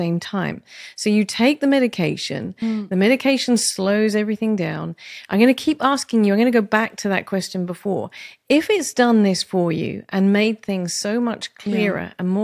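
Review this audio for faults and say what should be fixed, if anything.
No faults found; nothing to fix.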